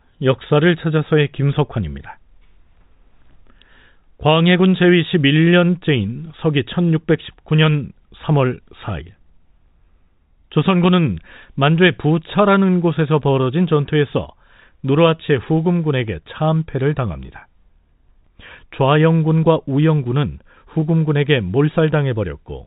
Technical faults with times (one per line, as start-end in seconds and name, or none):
15.26-15.28 packet loss with pitch repetition
17.26-17.28 packet loss with pitch repetition
20.80 packet loss with pitch repetition